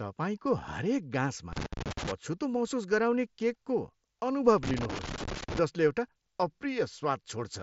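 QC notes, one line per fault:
1.53–2.12 s and 4.63–5.59 s, loose connector crackle: irregular bursts of scratching after "तपाईँको हरेक" and before "जसले एउटा". A worn contact is making and breaking, chopping the signal.
4.88 s, concealed Bluetooth headset packet loss: a 7.5 ms gap, pointing to one lost frame, was filled by repeating recent waveform. It is nearly hidden inside the second crackle burst.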